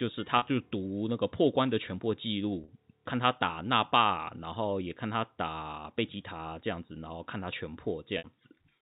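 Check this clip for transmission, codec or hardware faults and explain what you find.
There's one kind of fault here: packet loss with pitch repetition, at 0.38 to 0.42 s, 2.64 to 2.68 s and 8.18 to 8.24 s. Audio dropped out for about 40, 40 and 60 ms, which fits a few lost 20 ms packets. The receiver filled each gap by looping the last pitch period, so the speech briefly holds on a slightly buzzy tone before carrying on. The G.711 telephone band limit at 4 kHz is audible too.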